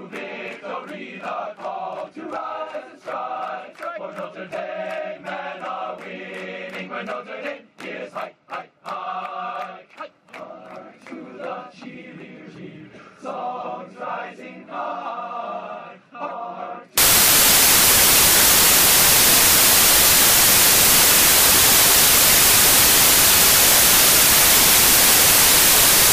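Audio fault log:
16.98–26.13 s, samples built from the wrong bytes: from 16.98 s to the end, the sound gives way to loud, harsh broadband noise. The reader is assembling each sample from misaligned or misordered bytes, perhaps one byte out of step or with the byte order reversed. The rapidly fluctuating low-order bits end up in the most significant position, so every value swings almost at random across the full range.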